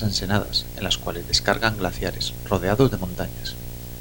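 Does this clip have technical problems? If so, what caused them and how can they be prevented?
Yes, there's video or display buzz running under the speech for the whole clip. You can hear a steady buzz at 59.94 Hz, the field rate of the picture, with a gritty hash riding on top, plus a thin whine up at 15.7 kHz from the line scan. It sits only about 15 dB below the speech, so it's hard to miss. A screen or video cable is coupling into the audio path. To prevent it, keep audio cables away from monitors and video lines, and use balanced, properly grounded connections.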